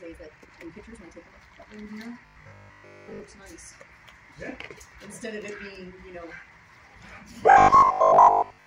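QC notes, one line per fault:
0.00–1.68 s, time-stretched section: software likely squeezed this stretch to fit a shorter length, dropping short pieces to keep the pitch while running at 1.77 times speed. The pace jumps abruptly and sounds rushed at unchanged pitch.
2.26–3.20 s and 7.50–8.66 s, robotic sound from repeated short buffers: new audio likely arrived too seldom, so playback kept looping its last short buffer, which fits a 20 ms buffer, while most of the real audio was skipped. The loop forces a rigid, metallic 50 Hz buzz that only roughly follows the underlying sound.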